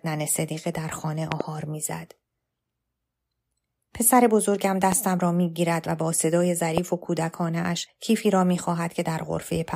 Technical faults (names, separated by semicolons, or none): loud pop